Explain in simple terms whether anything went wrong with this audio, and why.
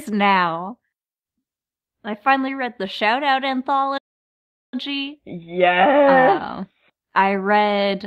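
Something did go wrong. At 3.97 seconds the speech suddenly stops in mid-flow, and nothing is heard until 4.74 seconds. That is a silent gap of about three quarters of a second. This is a playback stall. The most likely cause is that the player briefly ran out of audio data, or was held up by another task, so it had nothing to send to the speakers. Once it caught up, the speech carried on.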